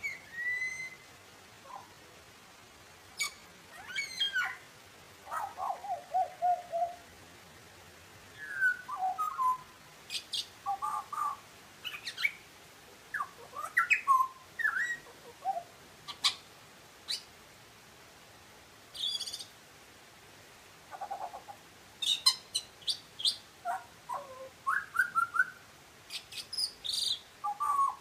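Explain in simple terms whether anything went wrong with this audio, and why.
Software likely stretched the opening stretch of this recording, from the start to about 9.9 s, to make it fill more time. This is a time-stretched section: to slow the audio to roughly three quarters of its normal pace without lowering the pitch, the program repeated short slices of sound. That is why the first ten seconds sound drawn out, and then the pace jumps back to normal at 9.9 s while the pitch never changes.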